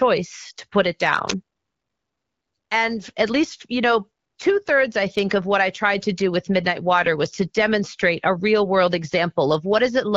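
At 1.30 s, just after "to put it", an uninitialised buffer plays out. Leftover memory becomes a loud 11 ms noise burst, fitting a 512-sample buffer.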